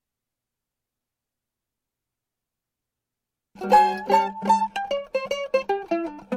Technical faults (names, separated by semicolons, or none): none